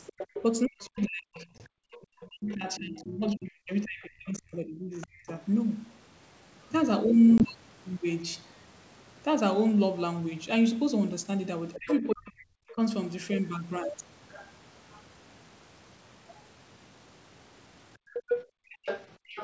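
Other side's voice leaking through, 0.06 to 0.43 s: a second voice sits about 10 dB under the speech. Its likely cause is a loudspeaker on the talker's device feeding the far end back into the microphone, with the echo canceller leaving a residue. It returns more faintly, about 25 dB down, from 0.97 to 2.8 s and from 5.01 to 5.3 s, then strongly from 11.73 to 12.72 s, at about 10 dB down.

Speech suppressed in double talk, 0.42 to 5.28 s: the talker's level falls away in patches totalling around four seconds, at worst by roughly 40 dB, so the voice dips and breaks up. The likely cause is both sides speaking at once, which left the echo canceller unable to separate the local talker from the echo, so it turned both down.

Packet loss on an ADPCM call, 1.58 to 1.61 s: 20 ms of audio drops into a hard-edged silent gap, buried inside the suppressed stretch. It happens again at 7.38 to 7.43 s. 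After each gap the decoder's predictor and step size no longer match the sender's, so the speech comes back slightly distorted and takes some tens of milliseconds to settle. The coding points to G.722 wideband.

Speech suppressed in double talk returns at 11.76 to 12.79 s, over the strong leak. It is shallower, dipping by about 30 dB for roughly half a second in total.

Background gated by the echo canceller, 17.98 to 19.31 s: the room sound drops out in short pieces, about half a second altogether, and falls by about 40 dB at its deepest. The canceller clamps the microphone hard while the loudspeaker plays, then releases it. This overlaps the loudest leak, from 18.13 s to the end, where the other side's voice is only about 5 dB below the speech.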